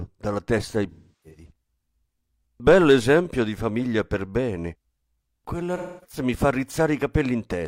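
AAC frame loss with concealment strikes twice in the speech. From 0.91 to 1.51 s, 384 ms of lost frames, longest run around 300 ms, are rebuilt from the last good spectrum, smearing into a noisy patch that decays then fades back. From 5.77 to 6.18 s, 256 ms smears likewise.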